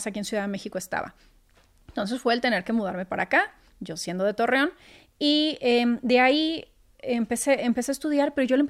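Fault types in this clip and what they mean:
No technical faults can be heard in the recording.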